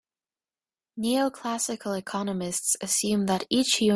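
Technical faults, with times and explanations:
No technical faults are heard in this speech clip.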